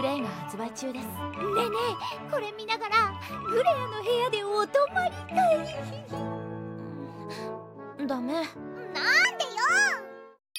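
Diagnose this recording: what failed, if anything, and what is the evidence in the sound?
The final stretch, from 9.25 s to the end at 10.58 s, is a section at the wrong speed. It runs 1.22 times faster than the preceding material, and its pitch rises by about three semitones in step, so tempo and pitch shift together at one boundary. The likely cause is an editing or playback stage that rendered that segment against a mismatched sample clock, treating it as if it were recorded at a higher rate.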